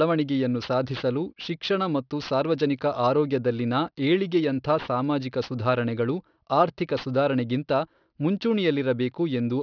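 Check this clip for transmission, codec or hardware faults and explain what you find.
Aliasing runs through the whole clip. The speech sounds like it was resampled to about 11 kHz with no anti-aliasing filter before the rate change, so everything above half the new rate, about 5.5 kHz, folds back below that point at unrelated frequencies. The folded energy sits roughly 25 dB under the speech, giving sibilants a gritty, metallic edge. The spectrum stays dense right up to the 5.5 kHz band edge.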